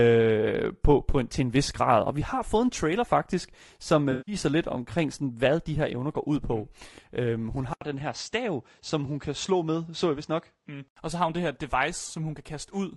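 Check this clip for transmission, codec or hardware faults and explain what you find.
Three faults are audible: codec damage throughout, one concealed dropout, and a change of input partway through.

Throughout the speech, the low-delay AAC compression is plainly audible: the voice is rough and grainy, with noise filling the gaps between harmonics, which fits AAC-ELD at around 32 kbps as the likely cause. Its short frames resolve pitch poorly, so a spectrogram shows smeared harmonics and a hazy, synthetic-looking top band.

From 4.11 to 4.35 s, between "en trailer faktisk som" and "lidt omkring sådan hvad", there is AAC frame loss with concealment. About 160 ms went missing, consistent with eight lost frames. The decoder rebuilt that span from the previous spectrum, giving a smeared, noisy patch that shows as a blurred, featureless block on a spectrogram.

From 7.73 to 10.96 s, the input is switched to a poorer device, likely another microphone or a headset profile. 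An 80 ms silence marks the switch, visible as a flat gap in the waveform. After it, the sound turns duller and nothing appears above 8.2 kHz, so the spectrogram is cut off sharply. The level stays about the same, and a new, faint noise floor sits far below the voice.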